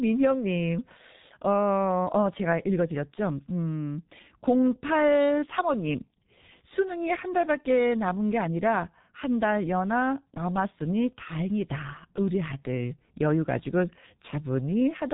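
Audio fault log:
throughout, G.723.1 codec: the speech is heavily damaged by low-rate coding, consistent with a roughly 6 kbit/s telephony mode. Nothing above 3.8 kHz survives, so it sounds muffled, and the slowly updated vocal model over long frames leaves a hoarse texture with smeared consonants.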